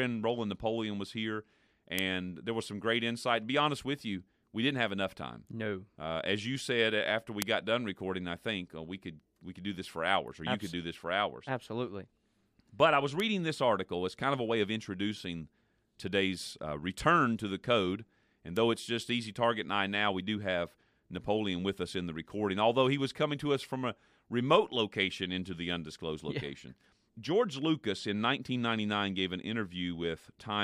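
Four bit error spikes tick through the speech at 1.99 s (after "was here"), 7.42 s, 13.2 s and 18.57 s: single flipped bits that jolt one to three samples by a power of two, giving sharp broadband clicks peaking around -5 to -18 dBFS.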